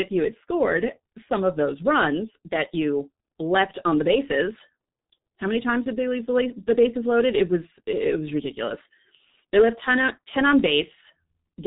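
Throughout the speech, G.723.1 codec damage is heavy: nothing above 3.8 kHz, hoarse muffled tone, smeared consonants, consistent with roughly 6 kbit/s coding in 30 ms frames.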